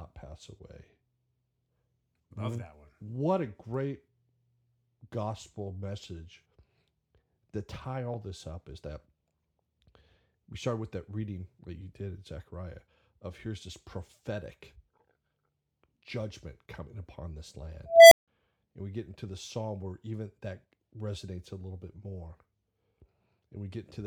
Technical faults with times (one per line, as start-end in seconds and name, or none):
17.86-18.28 unstable filter